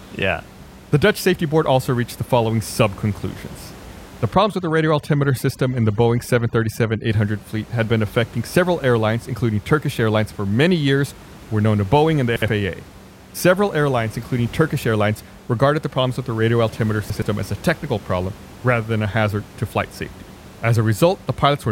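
From 4.34 to 7.10 s the background drops and breaks up into twinkling specks, the mark of overdone noise removal: narrow frequency bands near the estimated room noise, which sits about 21 dB below the speech, were cut too hard, taking quiet speech detail with them. At 12.36 to 12.48 s and again at 17.10 to 17.22 s there is a brief garbled jumble. These are chunks out of order: a 60 ms chunk played one chunk late, leaving three hard joins.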